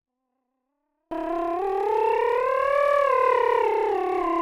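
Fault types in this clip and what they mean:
24-bit alignment error (too quiet): The opening of the music, from 0.0 to 1.11 s, plays back clean but about 48 dB down and nearly inaudible, because 24-bit samples sitting in the low bytes of a 32-bit word are being read as full 32-bit integers, shrinking every value by a fixed factor. On a waveform that stretch looks like a flat line before the normal-level waveform resumes; a spectrogram shows the same spectral shape, only much fainter.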